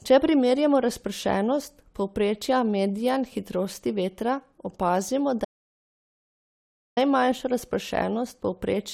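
At 5.45 s the speech cuts out abruptly into total silence, with no room tone left. It returns mid-flow at 6.97 s, so about 1.52 s of speech is gone. This audio dropout to silence likely came from a lost input while silence was still being recorded.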